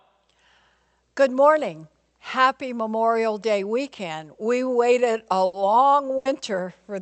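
Speech carried over a call path, with two bursts of packet loss at 5.45–5.55 s and 6.17–6.27 s. Each time, roughly 80 ms of lost audio is concealed by stretching and fading the previous sound, so a voiced sound becomes a held buzz and other sounds a trailing hiss before the speech jumps ahead. On a spectrogram this shows as smeared, steady harmonics fading out. The waveform shows a decaying, repetitive stretch and then an abrupt resumption. Above everything, content stops near 8 kHz, as expected from the codec's band limit.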